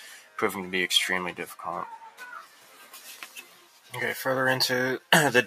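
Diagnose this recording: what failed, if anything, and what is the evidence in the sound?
Level pumps and thins throughout, swinging by around 10 dB: a speech noise suppressor in call processing was applied to non-speech sound, treating steady content as noise.

Sustained sound sinks at 0.09–0.38 s, 2.43–3.01 s and 3.23–3.94 s, by about 8, 8 and 9 dB. This is sound cut by the noise suppressor, which mistook these passages for noise.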